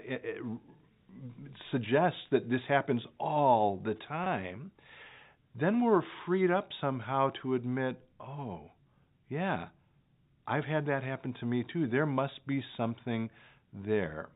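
Packet loss with pitch repetition occurs at 4.24 s, lasting about 20 ms, which points to a single lost packet. The receiver filled the gap by repeating the last pitch period of the speech, so the moment sounds like a brief, slightly held buzzy tone before the telephone-band G.711 audio resumes.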